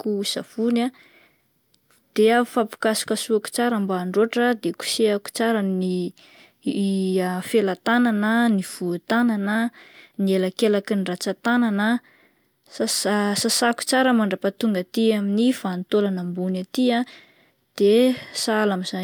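A recording of speech, with no technical fault to report. Nothing in the signal calls for a time or a cause.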